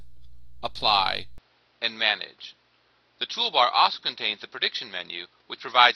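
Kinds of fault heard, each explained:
Input switched to a poorer device: from 1.38 s onward the sound turns duller and boxier, likely from a change to a lesser microphone. A spectrogram shows energy cut off above 5.9 kHz, the waveform level shifts by about 5 dB without a gap, and a new noise floor appears roughly 40 dB down.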